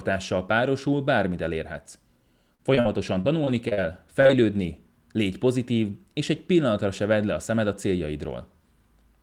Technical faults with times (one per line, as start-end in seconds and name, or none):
2.55-3.79 repeated packet loss (robotic sound)
4.21-4.31 short concealed packet loss